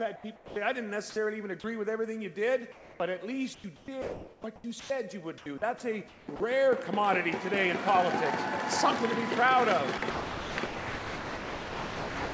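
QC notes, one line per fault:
0.16–0.56 s and 2.72–3.00 s, comfort noise in place of the background: the real background, which sits about 24 dB below the loudest sound, flattens for roughly 0.3 s each time into steady, featureless hiss, about 2 dB quieter on the second occurrence. The likely cause is discontinuous transmission, with the receiver filling the gap with synthetic noise. Like the rest of the audio, the fill has nothing above 8 kHz.
1.10–1.16 s, sound dropped by the voice detector: about 50 ms of sound vanishes under a brief patch of flat noise, likely because the detector mistook quiet sound for background.
3.54–6.40 s and 9.98–12.33 s, sound chopped by the voice detector: the sound turns choppy as parts of it are repeatedly replaced by flat noise, about 1.2 s and 2.2 s in total. The likely cause is the detector switching sending on and off.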